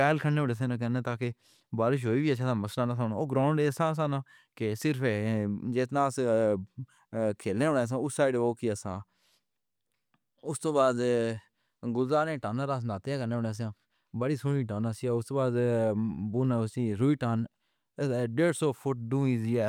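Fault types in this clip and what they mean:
No faults found; the speech signal shows nothing to report.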